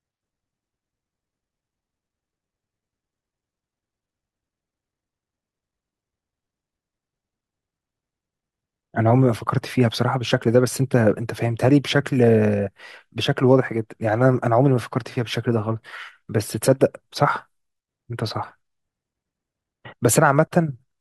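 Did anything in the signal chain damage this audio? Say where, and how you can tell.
No, nothing in the signal chain audibly damaged this speech recording. None of the stages, from wiring and conversion through to storage and playback, leaves a mark I can point to.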